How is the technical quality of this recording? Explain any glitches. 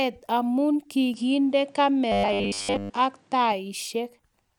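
The recording has two clear faults in its middle section, one overlapping the other.

From 1.14 s to 3.52 s the input switched to a poorer device, likely a change of microphone mid-recording. The speech loses its upper band, so it turns duller with no gap at the switch and no real change in level. A new noise floor comes in, sitting about 40 dB below the speech. At 3.52 s the original, brighter sound returns.

From 2.12 s to 2.93 s, inside that stretch, there is robotic sound from repeated short buffers. The speech becomes a rigid, metallic buzz at 100 Hz that roughly follows the syllables. This is likely audio arriving late, with the software looping the last 10 ms of sound to fill the gap. That length fits the 100 Hz pitch. Most of the real audio in this span is skipped and replaced by repeats.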